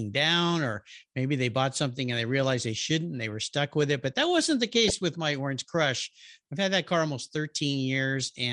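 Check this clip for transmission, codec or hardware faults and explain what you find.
Two faults are audible: codec damage across the whole speech clip and a brief burst of DAB burbling near the middle.

MP2 compression runs throughout. The sound is dull and gurgling, with a grainy edge. The likely cause is MPEG Layer II at a low rate, around 80 kbps, starving upper sub-bands of bits. A spectrogram would show flickering, blocky gaps above the retained bands.

DAB burbling occurs from 4.83 to 4.93 s, between "that wasn't the" and "with my". Bit errors, at a fraction of a percent, slipped past error correction and corrupted the audio data across a few frames. Wrong samples put short blips of noise into single sub-bands, giving a burbling sound. A spectrogram would show bright isolated band bursts.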